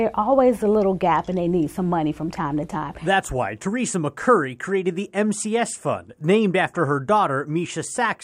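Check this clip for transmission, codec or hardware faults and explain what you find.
Nothing here points to a transmission, codec or hardware fault.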